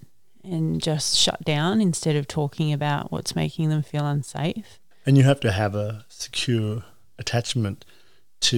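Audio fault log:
Nothing stood out on listening to this speech recording.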